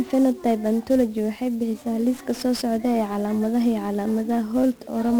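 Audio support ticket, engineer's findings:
1-bit DFPWM compression throughout: fuzzy, crackly speech, treble buried under broadband hiss. One bit per sample steering adaptive slope; heavy quantisation noise, consistent with a 48 kbps stream.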